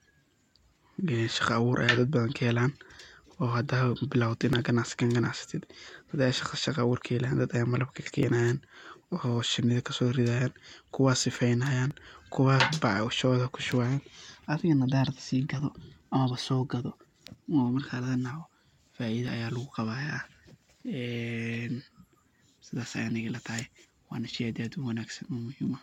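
From 0.84 s to 22.96 s the speech carries a click about every 3.69 s, roughly seven in all. These are likely clock drift buffer slips: two clocks disagreeing by a few hundred parts per million, so a short block of samples is periodically dropped or repeated.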